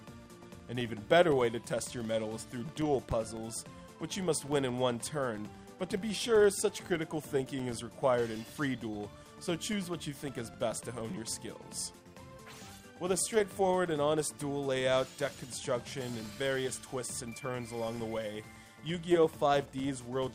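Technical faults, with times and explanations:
Throughout: filter restarted on every block. The filter drops its memory at each block boundary and restarts from silence, so every block opens with a small transient. These repeat at about 23.4 Hz, heard as a low buzz or rattle of ticks that rises and falls with the sound's level, which fits a 2048-sample block. A waveform shows evenly spaced glitches; a spectrogram shows thin vertical stripes at that spacing.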